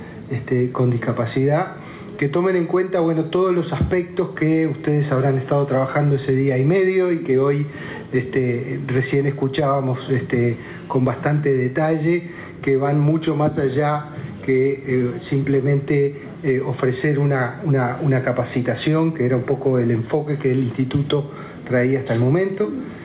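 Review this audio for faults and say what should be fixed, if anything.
Gain pumping, throughout the clip: the gain ducks by around 10 dB under each loud sound, squashing loud and soft parts together. Likely cause is input gain set far too high, forcing a fast limiter to clamp down repeatedly. Nothing above 4 kHz is heard, which fits a narrowband call codec such as G.711. To prevent it, lower the microphone input gain so the limiter rarely engages.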